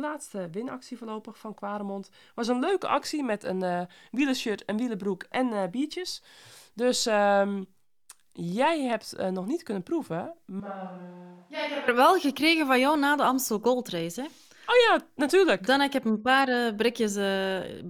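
From 10.60 to 11.88 s, the close microphone's feed likely dropped out, causing a switch to a distant microphone. The speech turns abruptly roomy and hollow with thinner bass, drops by about 10 dB, and room noise rises to roughly 35 dB below it, before the close sound snaps back.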